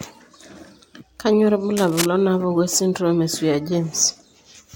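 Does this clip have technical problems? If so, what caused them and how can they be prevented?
Yes. From 1.77 to 2.06 s the speech has cable scratch noise on it, a dense, uneven burst of crackling and rustling about 5 dB quieter than the speech. It is likely caused by a worn cable or connector being moved, so that its contact resistance jumped about rapidly. On a waveform it shows as jagged, irregular spikes riding on the speech. A spectrogram shows ragged broadband vertical smears across that span. Replacing worn cables and securing connectors so they cannot shift during recording prevents it.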